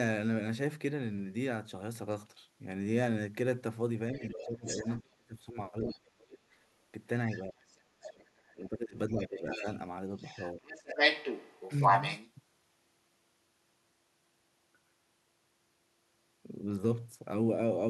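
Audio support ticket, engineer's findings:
Other side's voice leaking through: second talker audible at 4.15–5.01 s, 5.81–5.97 s, 7.31–7.77 s, 8.37–8.52 s and 9.23–12.3 s. Level runs from barely audible near 8.4 s to roughly matching or exceeding the local talker across 9.2–12.3 s. Likely residual echo: loudspeaker playback not fully cancelled from the mic path. Spectrogram: extra harmonic stack with its own pitch contour overlapping the talker's.

Speech suppressed in double talk: local talker dips at 4.18–6.42 s (deepest roughly 30 dB, about one and a half seconds affected), 7.44–9.66 s (around 25 dB, about two seconds) and 10.55–10.69 s (around 20 dB). Likely echo canceller/suppressor attenuating both talkers while the far end speaks. Waveform: envelope notches. Spectrogram: talker's harmonics dimmed during the dips.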